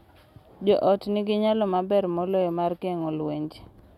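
Nothing in this bit of speech points to a technical fault, so there's nothing here to flag.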